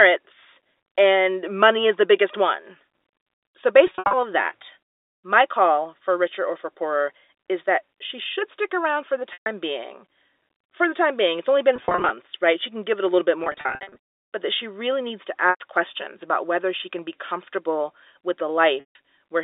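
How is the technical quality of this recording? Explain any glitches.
Quality is let down by packet loss with pitch repetition, heard at six points over a telephone-band line. The loss events are at 3.87–4.13 s, 9.33–9.46 s, 11.76–12.10 s, 13.44–13.96 s between "it a little bit" and "but that she really", 15.50–15.60 s after "she really needs to", and 18.80–18.95 s after "can be comfortable with". Each time, audio went missing and the receiver looped the last pitch period to fill the hole, so you hear a brief held, buzzy tone that fades. The scattered ones, at 3.9, 11.8 and 13.4 s, are spread over 0.26 to 0.52 s.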